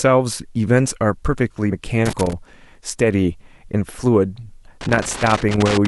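At 1.71 s, compressed frames are skipped. About three frames, roughly 70 ms of speech, never play, leaving a visible jump in the waveform envelope. Loose connector crackle follows from 2.06 to 2.33 s and from 4.81 to 5.86 s. An intermittent contact chops the signal into irregular scratchy bursts, which show on a spectrogram as broadband vertical streaks.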